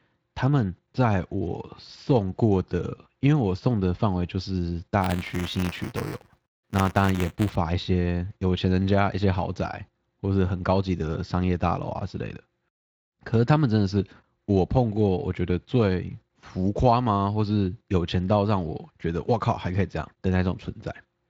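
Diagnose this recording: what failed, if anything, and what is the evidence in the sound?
Buffer tearing at the driver or buffer stage, from 5.01 s to 7.55 s: a steady 200 Hz robotic buzz over the speech, which fits a 5 ms period. A small slice of each period carries audio about 10 ms old, with hard joins on both sides. The light, slightly hoarse Speex texture runs through the whole clip, but this buzz is locked to the period rate, so it is not codec roughness.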